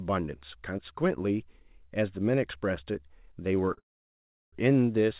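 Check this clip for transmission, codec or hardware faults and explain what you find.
Two related transmission faults run back to back in the last second and a half of the speech, both caused by packets arriving late.

Short stall from a late packet, 3.73 to 3.79 s: a packet failed to reach the receiver on time and the jitter buffer emptied. The receiver kept the most recent sound going for about 42 ms until the packet turned up, then resumed at the same point. Nothing is lost, but the sound at that moment is held slightly too long and carries a faint buzzy smear.

Call audio freeze, 3.79 to 4.54 s: the audio stops for about 731 ms. The sound just before it trails into a brief fading buzz and then about 710 ms of silence, after which the speech resumes exactly where it stopped, so the gap is added time rather than missing audio. The likely cause is a longer hold-up of packets in transit that drained the jitter buffer again. 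The receiver stretched the last sound until it faded out, then waited for the delayed packets. Across both events, the speech ends up roughly three quarters of a second later than it should. The band-limited, telephone-like quality throughout, with nothing above 4 kHz, is what the G.711 mu-law call codec produces, which fits a 64 kbps link.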